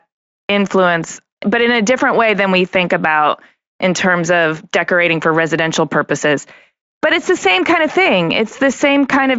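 No technical faults can be heard anywhere in the speech. The Speex coding comes through with at most a faint trace of its character, and content stops at about 7.7 kHz, which fits a high quality setting of that codec.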